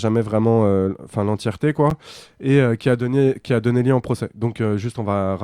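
At 1.90 s there's a block of digital silence, a gap of about 8.8 ms where the sound cuts straight out and then comes back with no fade either way. That kind of hole usually means the output buffer wasn't filled in time. Because it's so short, you don't hear it as a pause in the speech. The two hard edges land almost on top of each other, so it comes across as a tick or dip.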